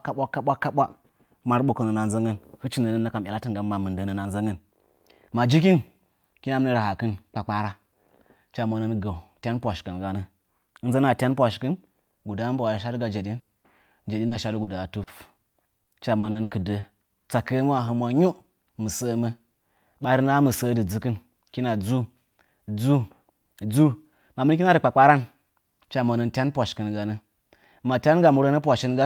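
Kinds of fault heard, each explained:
Burst of packet loss: At 13.39 to 13.50 s the speech stops progressing and the last sound is stretched into a held buzz or fading hiss that dies away, then the talker resumes further along with a piece missing. About 80 ms of audio never arrived in time. The receiver filled the hole by continuing and fading what it had last heard, and the skipped stretch was not recovered.
Short concealed packet loss: Brief smears or wobbles, each about 40 ms long, occur at 13.59, 14.27, 14.63 and 15.03 s. Each one briefly blurs the speech, and a short consonant can drop out. In each case a short run of audio failed to reach the decoder in time. The receiver covered it by extending the preceding sound from its pitch, or with shaped noise, and then blended back into the real signal.
Repeated packet loss (robotic sound): Between 15.83 and 16.86 s the speech becomes choppy, with bits missing. 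Five separate dropouts fall within about one second. The longest is about 80 ms, and together they account for 240 ms, roughly a quarter of the stretch. Each gap is patched by continuing the last sound, and the next gap arrives before the speech can settle.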